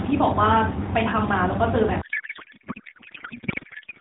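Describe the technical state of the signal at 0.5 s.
At 0.5 s the speech is intact, with no fault at that moment beyond the narrowband character of the AMR narrowband mobile codec it passes through.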